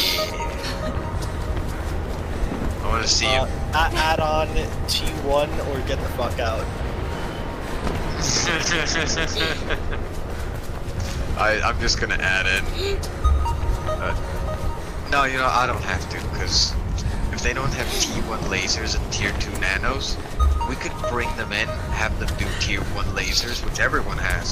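At 14.10 s, compressed frames are skipped. The decoder drops what sounds like two frames of about 23 ms each, so the audio jumps ahead by roughly 50 ms.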